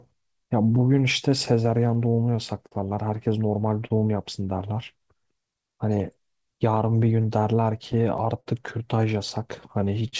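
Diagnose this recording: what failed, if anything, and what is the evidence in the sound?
Network timing is the culprit here, starting with clock drift between sender and receiver. The far end's clock runs roughly 4 percent slow, so the jitter buffer keeps draining on this speech. That produces small hiccups scattered unevenly through the whole clip rather than one clean failure.

The repeated timing corrections are the buffer's response, running from 0.21 to 10.03 s. It keeps stretching short pieces, playing at about 98 percent speed and adding around 200 ms overall. The edits run always in the same direction.

There are also two bursts of scattered short gaps, from 0.02 to 2.73 s and from 6.26 to 8.48 s. Each burst has about seven late or lost packets, the longest around 50 ms. The receiver bridged them by extending the last sound, so you hear brief ticks and smears over the G.722 path, which has nothing above 8 kHz.

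Finally, there are two short stalls from a late packet, at 3.86 to 3.92 s and 10.08 to 10.14 s. In each one the buffer ran empty, and the last sound was held for 41 ms and 44 ms respectively. Playback then resumed where it left off, so nothing is lost, just a held sound with a slight buzz or dip.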